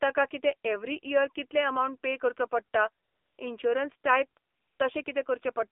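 The whole clip is speech carried through the AMR narrowband mobile codec. Nothing reaches above about 3.5 kHz or below 300 Hz, so the sound is thin and boxy. The codec rebuilds the voice from a vocal-tract model driven by sparse pulses, and the damage is plainly audible: a buzzy, synthetic edge on voiced sounds, which fits a low mode of around 7.4 kbps.

AMR comfort noise replaces the signal three times. The first runs from 3.04 to 3.38 s, right after "अमावंट पे करचो पडटा". The second runs from 4.52 to 4.80 s. The last is a brief 20 ms patch at 5.04 to 5.06 s. In each case the sender judged the line silent and stopped transmitting speech frames, and the receiver filled the gap with generated noise. That noise is steady and smooth, unlike the real background, and it switches in and out abruptly at the gap edges.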